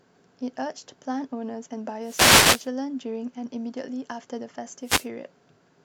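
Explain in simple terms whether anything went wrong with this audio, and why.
Wireless microphone noise hits occur from 2.02 to 2.69 s and again from 4.83 to 5.08 s, each a brief swish of static over the speech. The microphone sends its sound by radio, and at these moments the signal faded as reflected copies of it cancelled out. The receiver's own hiss rose to fill the gap for about two-thirds of a second, then a quarter of a second.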